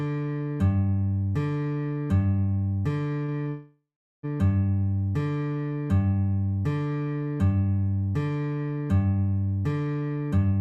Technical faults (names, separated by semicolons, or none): short stall from a late packet; call audio freeze; jitter buffer speed-up